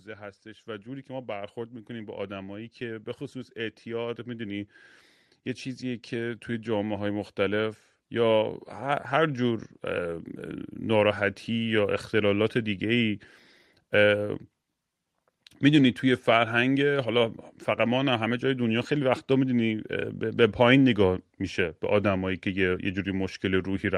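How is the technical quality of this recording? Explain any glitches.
The recording has two level faults, both from automatic gain rising. From 0.05 to 4.77 s, the level climbs by about 9 dB. It happens again from 5.79 to 10.24 s, rising about 7 dB. In each case the gain control judged the input too quiet and turned itself up slowly. The speech and the background noise swell together over several seconds. The audio also passes through a call codec, and its top end stops near 12 kHz, which fits Opus at a moderate bitrate.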